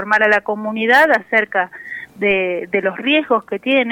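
A single low thump lands at 2.31 s while the sound carries on unchanged, the mark of a DC step. The waveform's zero line jumps by about -29 dBFS, as when a converter recalibrates or an offset input is switched in, then drains away through a 5 Hz high-pass.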